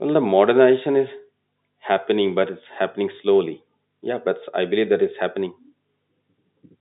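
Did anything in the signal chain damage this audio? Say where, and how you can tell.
No, the speech carries only the expected telephone-line character of G.711 mu-law coding, consistent with a 64 kbps channel: a band of roughly 150 Hz to 3.7 kHz with nothing above 3.8 kHz, and any coding grain no more than faint.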